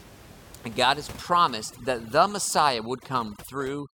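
From 1.20 s to the end, overdone noise removal takes hold: an over-aggressive reducer mutes frequency bands near its noise estimate, so room noise, earlier about 21 dB below the speech, drops to twinkling near-silence, unlike a steady codec smear.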